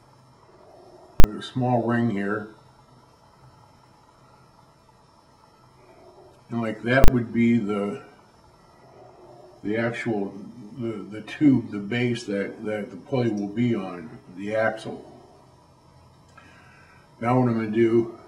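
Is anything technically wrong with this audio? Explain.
Yes. At 1.2 to 1.24 s and again at 7.04 to 7.08 s, a calculation produced invalid numbers that went to full scale. Each 40 ms block was pinned at one extreme value. The block is that short, so each event is heard as a single loud bang.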